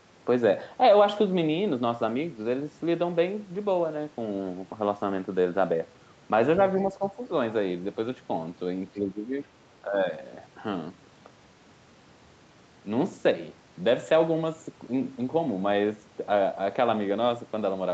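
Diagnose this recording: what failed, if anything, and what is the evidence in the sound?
Speech suppressed in double talk at 6.93–7.19 s, 8.93–9.33 s and 9.85–10.13 s. In each span the speech level sags briefly: by about 5 dB in the first and about 10 dB in the later two. The second dip is the longest, close to half a second. The stage is call processing. The likely cause is an echo canceller that, with both ends talking at once, could not separate the local talker from loudspeaker echo and attenuated both.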